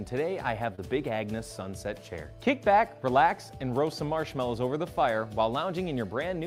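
A brief smear at 0.75 to 0.80 s, lasting about 40 ms, briefly blurs the audio with a wobble before it settles back. This is short concealed packet loss: roughly 20 ms of the stream failed to arrive at the decoder in time, so the receiver synthesised about 21 ms of stand-in sound by extending what came just before, then crossfaded into the real signal once it resumed.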